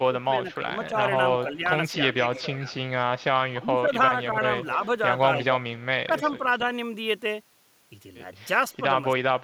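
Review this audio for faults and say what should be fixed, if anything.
Speech suppressed in double talk runs from 0.0 to 6.63 s, roughly two seconds of it affected in total, with dips of about 10 dB, and again from 9.31 s to the end with a sharper drop of about 25 dB. The likely cause is an echo canceller that cannot tell the talker from loudspeaker echo while both sides speak, so it pulls everything down. On a waveform the envelope sags in patches, and a spectrogram shows high frequencies thinning or gapping out. Tuning double-talk detection so it favours near-end speech would prevent this.

Echo leak appears from 0.88 to 3.24 s at a 290 ms delay, about 15 dB below the speech, and from 5.78 to 6.66 s at 292 ms, about 25 dB down. It is a faint, delayed repeat of the speech, likely loudspeaker pickup that the loudspeaker side's echo canceller failed to remove and sent back. A spectrogram shows a fainter copy of the speech harmonics shifted about 0.29 s later, and the waveform carries low-level trailing bursts. 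Better echo-path adaptation, or a headset on the loudspeaker side, would prevent it.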